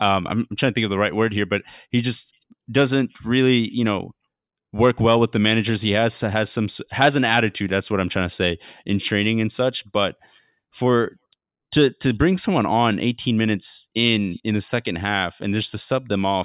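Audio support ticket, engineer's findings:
Nothing stood out on listening to the speech.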